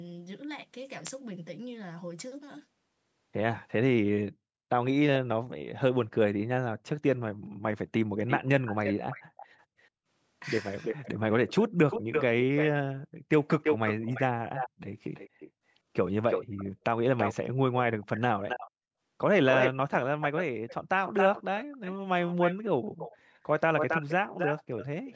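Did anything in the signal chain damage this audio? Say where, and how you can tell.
Yes. The damage happened at the call-processing stage, where an echo canceller likely left part of its loudspeaker pickup in the outgoing signal. That echo leak adds a delayed copy of the speech at 8.27–9.88, 10.84–12.67, 13.63–15.51, 16.3–17.35, 18.02–18.71, 19.5–23.17 and 23.77–25.15 s. The copy trails by 335 ms, then by 272 ms from 18.0 s onward, and sits only about 5 to 10 dB below the speech.

Speech suppressed in double talk appears at 19.72–20.04 s, while the echo is also present. The canceller likely could not separate the local talker from the returning echo, so it turned both down. The speech falls by around 40 dB for roughly 0.3 s before recovering.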